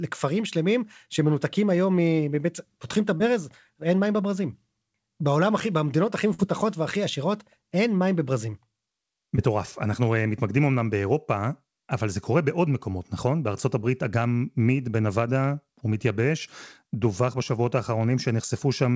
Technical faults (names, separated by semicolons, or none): short concealed packet loss; burst of packet loss